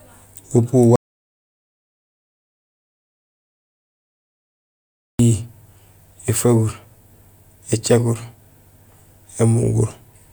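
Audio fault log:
0.96–5.19 s, audio dropout to silence. The speech cuts off mid-flow and resumes 4.24 s later. The gap is silent, with no room tone at all. The input was likely lost while recording kept writing silence. Anything spoken then is gone.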